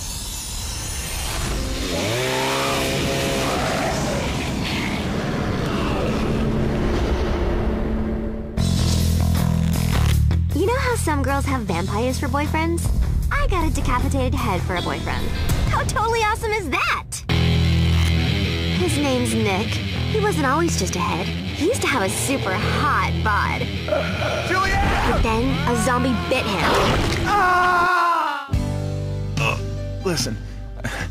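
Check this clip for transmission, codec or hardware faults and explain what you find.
One fault is present: a regular click recurring for almost the whole clip.

Clock drift buffer slips: from about 0.66 s to 30.68 s, a short click or pop lands every 5.0 s, about seven times in all. The strict periodicity likely comes from two devices running on independent clocks, mismatched by around 500 ppm. The buffer between them drifts until a block on the order of 150 samples is dropped or repeated, and each slip breaks the waveform, producing the click.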